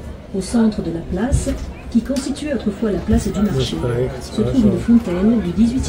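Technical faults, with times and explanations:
No technical faults can be heard anywhere in the clip. There is nothing here that needs a time or an explanation.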